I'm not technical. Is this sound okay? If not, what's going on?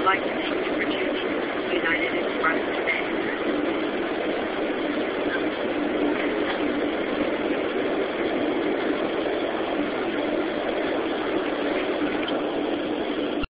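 No. At 7.68 s there are compressed frames skipped: about three chunks of the stored audio, roughly 70 ms, never play, so the sound jumps ahead. Unlike a dropout, there's no silent gap.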